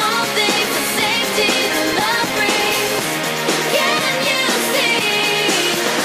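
A filter restarted on every block from 0.58 to 3.09 s: it drops its stored state at each block boundary and begins again from silence, putting a small transient at every block start. The result is a 43.1 Hz buzz that rises and falls with the sound's level, a rate that fits a 1024-sample block.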